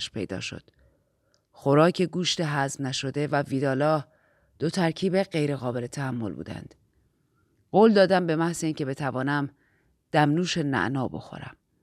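No technical faults can be heard anywhere in the speech; the signal stays intact and steady from beginning to end.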